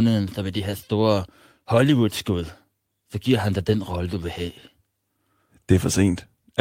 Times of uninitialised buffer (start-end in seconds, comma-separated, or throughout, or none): none